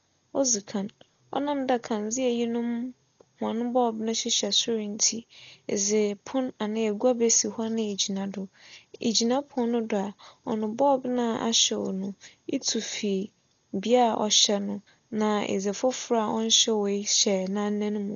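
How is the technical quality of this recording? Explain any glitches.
The recording has heavy coding damage throughout: the speech sounds dull and muffled, with nothing above 7 kHz, and a rough, fluttering noise clings around voiced tones. This is likely Dolby Digital compression at a very low bitrate, consistent with about 40 kbps. The encoder narrowed the band and left many frequency lines without mantissa bits, so the decoder filled them with dither noise.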